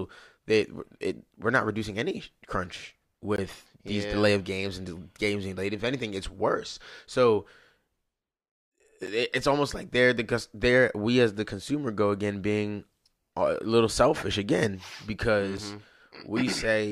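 Speech, interrupted three times by a block of digital silence: at 3.36 s (about 20 ms), 9.06 s (10 ms) and 15.57 s (about 7 ms). At each point the signal drops straight to silence and returns with no fade, so the two shorter gaps read as ticks and the 20 ms one as a short hole. This points to the output buffer not being filled in time, leaving runs of silence.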